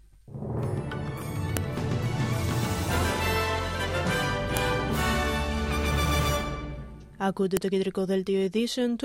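Separate audio pieces, joined about every 3 s, kept their file headers, so those bytes play as samples: a file header played as audio, heard as sharp snaps at 1.57, 4.57 and 7.57 s.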